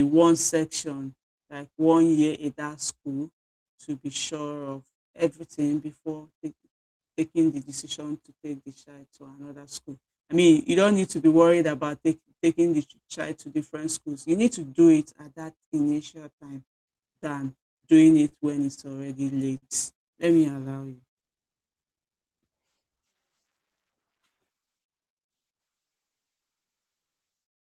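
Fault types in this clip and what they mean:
Repeated stalls (stutter): from 17.59 to 18.80 s, just after "that initial time than", the speech catches six times, each gap held over from the last sound, the longest 28 ms and 97 ms in all. Packets arrived late, emptying the jitter buffer repeatedly; nothing is lost.
Short stall from a late packet: at 19.57 s one sound is held about 51 ms too long, with a faint buzz or dip. A packet missed its slot, the jitter buffer ran dry, and the receiver stretched the last sound until it came, adding 51 ms of delay.
Jitter buffer slow-down: between 20.68 and 21.94 s the speech drags at 94% speed while its pitch stays put, sounds drawn out. The receiver was rebuilding its buffer reserve by repeating single pitch periods and pause fragments, adding 88 ms.
Jitter buffer speed-up: from 23.91 to 25.18 s the speech runs hurried at 111% speed, pitch unchanged. 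With too much audio queued, the receiver trimmed short pitch-period pieces again and again, cutting roughly 150 ms to bring the delay down.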